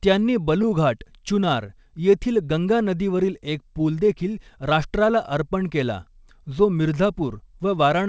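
At about 1.66 s there's a short stall from a late packet: a packet arrived late, the jitter buffer ran dry, and the receiver stretched the last sound for about 20 ms before carrying on. Nothing's lost, but the delay grows by 20 ms.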